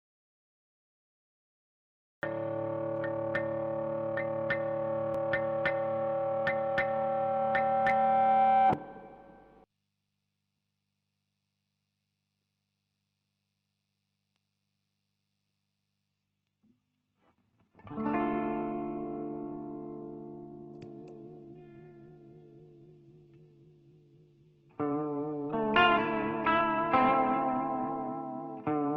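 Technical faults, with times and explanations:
0.00–2.23 s, audio dropout to silence: the clip opens already in this state, with silence and no room tone until sound enters abruptly at 2.23 s. This likely comes from a lost input while the recorder kept writing silence, so the missing material is gone.
16.08–28.08 s, adaptive stream at a lower bitrate: quality falls suddenly without a gap. Nothing remains above 8.2 kHz, and the treble turns dull with rising codec artefacts. This fits an Opus stream stepping down from about 64 to 12 kbit/s.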